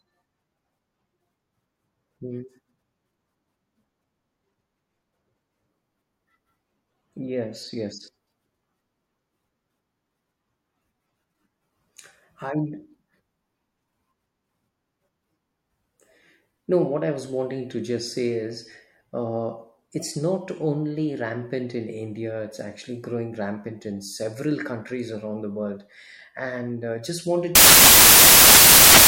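Right after "and uh just wanted", from 27.55 s to the end at 29.07 s, the speech gives way to loud, harsh broadband noise. This is samples built from the wrong bytes: each sample's bytes are misassembled, so the rapidly changing low bits dominate every value.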